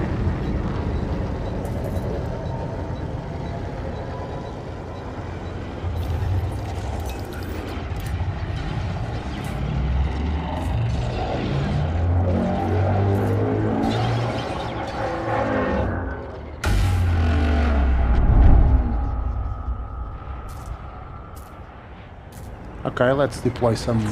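No technical faults are audible.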